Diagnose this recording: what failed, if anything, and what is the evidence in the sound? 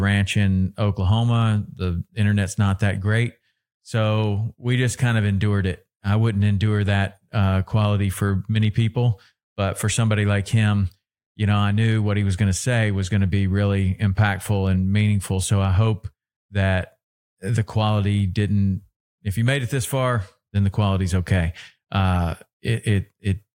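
Two sharp single clicks in the speech, at 8.65 s (after "that uh quality for") and 14.67 s (before "and meaningful"), point to dropped samples, likely at the driver or buffer stage. A couple of samples vanish, so the waveform jumps abruptly to a later value.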